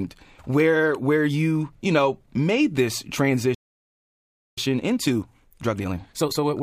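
A playback stall runs from 3.54 to 4.58 s: the speech cuts off mid-flow and the output sits silent for about 1.03 s, likely because the player ran out of buffered data or its thread was blocked, then the speech goes on.

Time-compressed catch-up follows from 4.58 s to the end. The player is working off the backlog by dropping small slices and cross-fading across the joins, so the speech runs at about 1.25 times normal speed, pitch unchanged.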